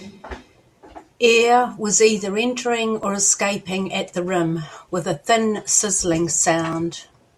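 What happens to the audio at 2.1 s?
At 2.1 s you're inside a run of clock drift buffer slips lasting from 1.18 to 6.73 s: a click or pop every 1.85 s, about four in all. The likely cause is two devices whose clocks disagree by very roughly 700 ppm, so the buffer periodically drops or repeats about 70 samples.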